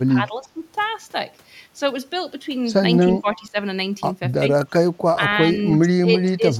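The speech drops in level at 0.2 to 0.6 s, 3.0 to 3.56 s, 4.86 to 4.93 s, 5.14 to 5.23 s, 5.46 to 5.51 s, 5.81 to 6.09 s and 6.25 to 6.49 s. The dips range from roughly 5 dB to about 15 dB deep. This is likely speech suppressed in double talk: the echo canceller mistook the talker for loudspeaker echo and attenuated them. On a waveform the envelope sags abruptly, and a spectrogram shows darker vertical bands across the speech.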